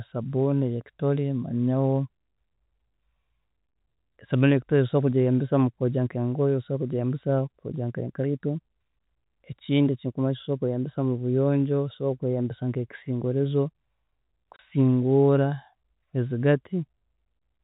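At 14.56 s, about 30 ms of packets never arrived and the receiver played silence in their place, which fits three 10 ms packets going missing. The telephone-band speech cuts out abruptly until 14.59 s, leaving a brief hole with hard edges.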